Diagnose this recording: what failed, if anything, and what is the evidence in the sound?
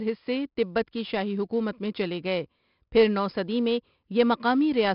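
The codec stage failed: the speech carries 4-bit ADPCM compression throughout, with heavy gritty hiss riding on every loud syllable and nothing above 5.3 kHz, which fits roughly 44 kbps. Unlike an analogue noise floor, this grit tracks signal level and smears sharp onsets where the adaptive step lags.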